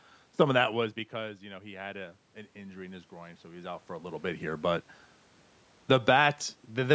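Speech, with its level pumped by automatic gain control. The first fault is automatic gain falling. From 0.26 to 1.49 s the gain drops about 6 dB, and the room noise sinks with the voice. It happens again from 5.77 to 6.2 s, by about 4 dB. The second fault is automatic gain rising. From 1.46 to 4.54 s the input is about 11 dB quieter, and the gain climbs about 10 dB to compensate. Voice and background swell together. A smaller rise of about 3 dB follows from 6.1 to 6.51 s. The talker also moves around 0.5 s and 3.5 s, which is natural and not a system fault.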